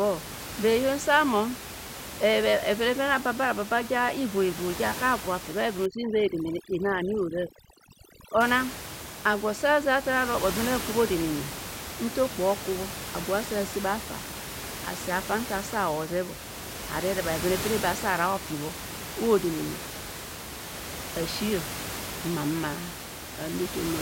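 From 5.86 to 8.41 s the room noise, which elsewhere sits about 10 dB below the speech, drops and breaks up into twinkling, warbling specks. This is overdone noise removal: a noise reduction stage set far too aggressively pulled individual frequency bands down or shut them off whenever they came close to its noise estimate. That stripped away the background noise along with the quieter parts of the voice, leaving isolated bursts of residue.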